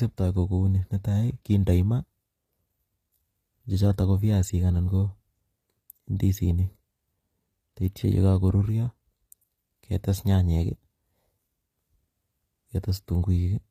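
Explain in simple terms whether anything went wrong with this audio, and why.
Something did go wrong, for the whole clip. The speech sounds coarse and metallic, and nothing is heard above about 14.9 kHz. The likely cause is HE-AAC compression: the top end is rebuilt from copies of lower sounds, not kept.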